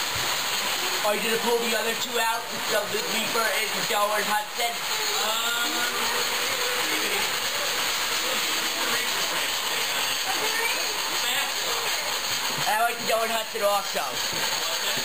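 No technical faults are audible anywhere in the recording.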